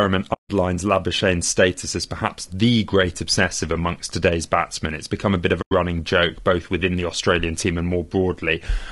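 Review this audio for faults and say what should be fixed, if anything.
The speech has a rough, grainy texture throughout, with noise filling in between the harmonics and a top end that sounds thinned and a bit synthetic. That's likely low-delay AAC compression of the AAC-ELD kind used on video calls, at a rate that sounds like around 32 kbps. Its short frames can't pin down pitch harmonics well and eat bits, so at this rate the damage is plainly audible. To prevent it, give the call more bitrate or use a codec mode with longer frames when latency allows.

There are two AAC frame losses with muting. The first runs from 0.33 to 0.50 s and leaves a hole of about 160 ms, which fits roughly eight lost frames. The second runs from 5.61 to 5.72 s, between "a bit of a" and "joke both within the", and is about 100 ms, which fits around five frames. The decoder zeroed the missing spectrum, and the overlapping windows fade out and back in, so both gaps have soft edges. 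To prevent it, add packet-loss concealment or FEC and make the jitter buffer sturdier on the network path.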